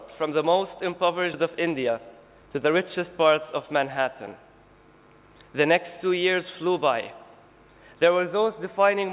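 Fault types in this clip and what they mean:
Skip ahead: A stretch of roughly 0.4 s of audio was discarded, either lost in transit or dropped by the jitter buffer when it overflowed, while newer audio was already queued behind it. At 1.34 s playback leaps straight over the missing portion with no fill, so the sound on either side of the cut is spliced almost directly together and the listener hears an abrupt forward jump rather than a gap or silence.
Jitter buffer speed-up: The jitter buffer was left holding more audio than its target, so the receiver trimmed it back by repeatedly cutting out tiny pitch-period-sized slices, roughly 150 ms in total. From 1.50 s to 3.56 s the sound plays at about 107% speed while keeping its pitch, giving a slightly hurried, compressed feel. The band-limited, 4 kHz-capped character of the call path stays unchanged throughout.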